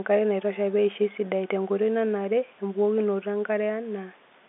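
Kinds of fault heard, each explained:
No faults are heard in this speech clip. It carries the narrow band of G.711 telephone coding, roughly 250 Hz to 3.6 kHz, with nothing above 3.8 kHz.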